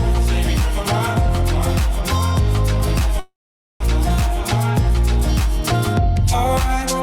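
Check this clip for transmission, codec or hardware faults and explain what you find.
One fault is audible. At 3.19 to 3.89 s, a long network dropout, likely from stalled packet delivery: the last sound fades as a buzz or hiss into 480 ms of silence, and 600 ms of audio is lost.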